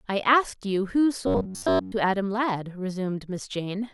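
From 1.27 to 1.92 s, the audio feed most likely ran short, so playback kept repeating its last small buffer instead of waiting for new samples. Across most of that stretch, real sound is skipped, producing robotic sound from repeated short buffers. The loop imposes a steady 93.8 Hz buzz, which fits a repeated segment of roughly 11 ms, and the speech turns rigid and metallic while loosely tracking its original contour.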